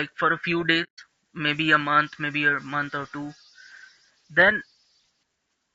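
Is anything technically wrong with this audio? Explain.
Yes. Throughout, the speech sounds rough and grainy, with noise filling the gaps between harmonics and a thin, synthetic-sounding top band. This is likely low-delay AAC compression (AAC-ELD); the plainly audible damage fits roughly 32 kbps. Its short frames resolve pitch harmonics poorly, so on a spectrogram the harmonic stripes look smeared and speckled, with a patchy upper band.

From 0.83 to 0.99 s, just before "maybe a", there is AAC frame loss with muting. About 150 ms of audio was lost, and the decoder zeroed the spectrum for those frames. Overlapping windows fade the sound out and back in, leaving a soft-edged hole. The waveform shows a tapered silent gap, and the spectrogram shows a blank vertical band.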